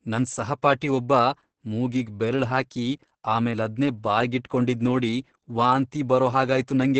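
Opus voice compression affects the speech throughout, and the damage is heavy. Nothing is heard above 8.6 kHz, so the top of the band is gone. The coarse linear-prediction coding sounds hoarse and slightly robotic. This fits SILK mode near 10 kbps.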